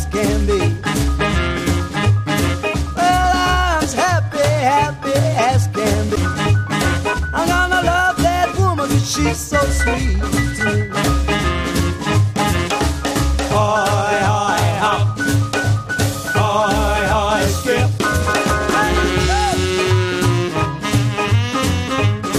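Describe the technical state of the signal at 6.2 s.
At 6.16 s there is a brief burst of damaged data in a compressed stream, lasting under 20 ms. A stretch of the encoded data is corrupted, so the decoder misreads those frames, loses sync and hunts for the next valid frame header, emitting a short garbled chirp or squawk. Unlike a buffer dropout, which leaves a gap of silence, or a plain click from a single bad sample, this blip comes from the decoder losing sync on corrupted encoded data.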